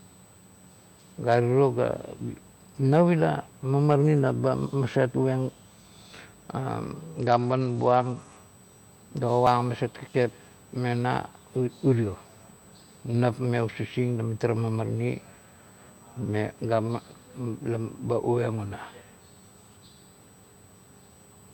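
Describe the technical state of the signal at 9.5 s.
At 9.47 s there is a small skip in the speech. A sliver of audio, roughly 20 ms, is gone, and the two sides are butted together with no silence between them. The jump lands just before "aset kakep". This is likely audio missing between chunks. The recorder would be working in blocks, and a piece drops while one block closes and the next opens. The spacing fits 6-second chunks.

Under that moment, and through the whole clip, runs a USB whine. It is a steady, fixed-pitch tone at 8 kHz, sitting around 35 dB below the speech. It comes from the USB bus drawing current in 125-microsecond microframes. That pulsing leaks into the audio through the power or ground wiring. It is heard as a thin, high whistle that never changes pitch.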